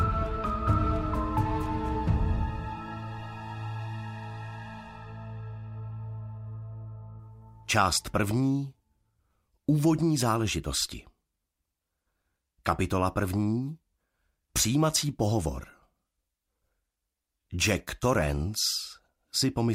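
Throughout, the resampler restarted on every block, treating each 10 ms block alone (which fits 44.1 to 48 kHz conversion), so block edges carry errors heard as a 100 Hz buzz with signal.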